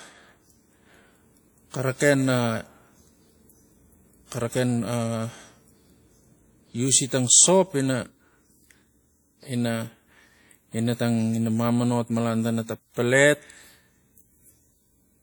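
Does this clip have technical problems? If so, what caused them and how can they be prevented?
Yes. WMA compression damage runs throughout the whole clip, plainly audible as a ringing, washy quality on the speech with a hiss that rises and falls along with it. This is likely the result of encoding with Windows Media Audio, a transform codec, at a rate that fits roughly 48 kbps. At that rate, quantisation noise spreads in time around each sound and weak spectral detail is discarded, even though content still reaches about 20.1 kHz. To prevent it, keep a lossless master and encode at a higher bitrate or with a more efficient codec.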